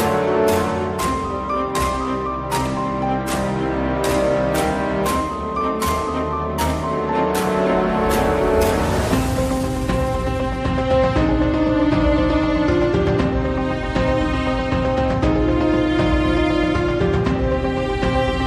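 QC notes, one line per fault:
No technical faults are present anywhere in this signal.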